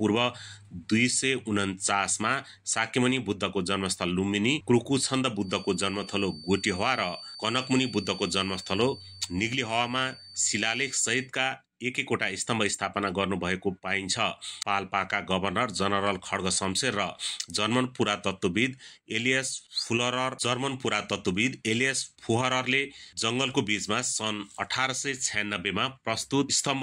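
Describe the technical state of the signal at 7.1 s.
At 7.1 s a feedback whistle is present, running from 5.37 to 11.32 s: a thin, slowly swelling 4.6 kHz tone roughly 20 dB below the signal, likely from a loudspeaker-to-microphone loop held just short of runaway.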